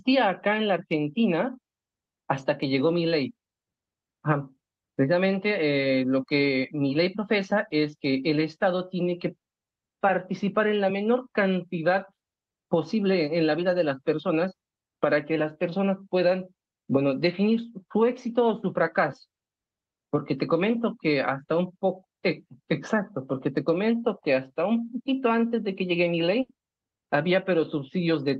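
Short concealed packet loss at 21.43 to 21.47 s in this speech recording: about 20 ms of audio never reached the decoder in time, so the receiver extended the preceding sound to bridge the hole and then crossfaded back, leaving a brief smear or wobble. A burst of packet loss follows at 26.41 to 26.51 s, where about 80 ms went missing in a row. The receiver stretched the last sound into a fading buzz or hiss before the speech picked up again further along, with that stretch lost. Both dropouts arrive over an Opus call path whose audio stops at about 12 kHz, which fits a bitrate around 32 kbps.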